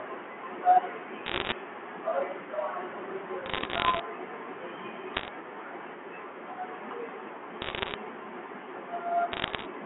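Speech heard through a G.711 telephone line, limited to roughly 200 Hz–3.4 kHz, carries bit errors on a digital phone line at 1.26–1.52 s, 3.46–4.00 s, 5.14–5.28 s, 7.62–7.94 s and 9.32–9.66 s. Flipped bits, at a rate of roughly one to one and a half percent, each corrupt a single sample, producing sharp crackling ticks over otherwise intact speech. A waveform shows isolated one-sample spikes, and a spectrogram shows thin vertical broadband lines.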